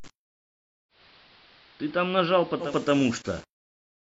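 Throughout, the speech carries grainy distortion that moves with the signal, around 30 dB down. The likely cause is low bit depth without dither, fitting 7-bit rounding.

From 0.89 to 2.75 s, digital radio blending to analogue AM occurs. 154 ms cross-fades bring hiss about 25 dB below and about 3 dB lower level.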